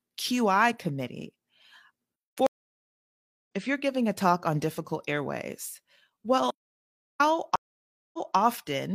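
At 2.47 s the speech stops for about 1.0 s, a stream reconnect: the connection dropped, the player fell silent, then rejoined the stream with a fresh decoder. The speech resumes at 3.47 s with "if you're giving", roughly half a second further on than where it broke off, so that stretch is simply skipped. On a waveform this is a flat line of silence that begins abruptly and ends with a fade-in. On a spectrogram it is a fully black vertical band, and the harmonic patterns on either side do not line up.

From 6.51 to 7.20 s comes an audio dropout to silence lasting 0.69 s. The likely cause is a momentary loss of the input signal, such as a failed link or stray mute, while writing continued. The sound cuts out mid-flow and returns mid-flow with no room tone in between, and whatever occurred then is lost. The waveform shows a flat segment, and the spectrogram shows a clean black gap with sharp vertical borders and no noise floor.

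A second stream reconnect begins at 7.56 s, with 0.58 s of silence until 8.37 s. This time playback resumes 0.23 s earlier than the point where it stopped, so a short piece of speech is heard twice. The waveform shows another dead-flat gap, and the spectrogram shows the same spectral shapes on both sides of the black band, a visible repeat.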